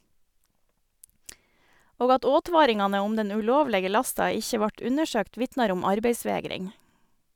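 No technical faults are audible.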